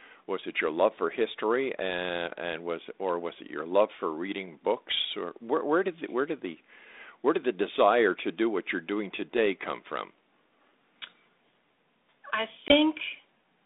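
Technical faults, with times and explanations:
12.68 to 12.74 s, packet loss on an ADPCM call: a 20 ms silent hole, roughly one packet, then a brief rough return while the decoder's predictor and step size catch up with the sender.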